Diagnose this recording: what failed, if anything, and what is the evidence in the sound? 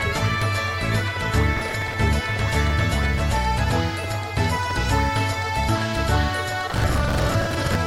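Processor overload crackle at the driver/buffer stage, from 1.57 to 1.94 s and again from 6.70 to 7.76 s. Runs of roughly 10 ms buffers missed their deadlines and replayed stale audio, producing gritty tearing. The spectrogram shows dense vertical broadband streaks, and the waveform shows hard-edged discontinuities.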